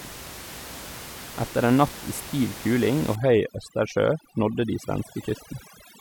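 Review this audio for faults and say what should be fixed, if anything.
From 3.16 s to the end of the clip at 6.01 s there's overdone noise removal. The room noise, about 15 dB under the speech before that point, drops and breaks up into twinkly specks. Quieter parts of the speech get cut along with the noise bands. To prevent it, back the reduction strength off so bands near the noise estimate are only turned down a bit, not switched off.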